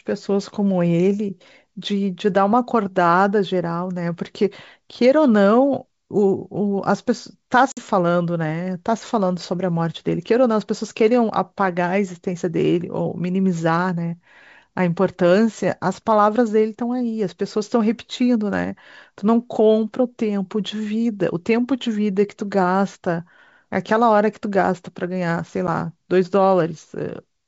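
Packet loss on an ADPCM call hits this speech clip, carried over G.722 wideband telephone coding, at 7.72 to 7.81 s, a hard-edged 50 ms silence suggesting a handful of lost packets, and at 25.67 s, a 10 ms gap suggesting about one. Each time, the decoder's adaptive predictor and step size lose track, so sound resumes briefly slightly distorted.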